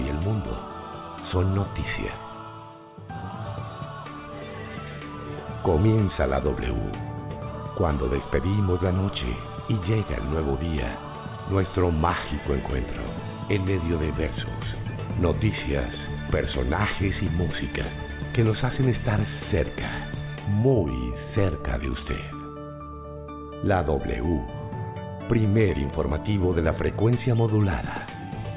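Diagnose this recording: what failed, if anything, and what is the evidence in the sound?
No failure at any stage: nothing in the signal chain, from capture through conversion, transport and playback, leaves an audible fault anywhere in the recording.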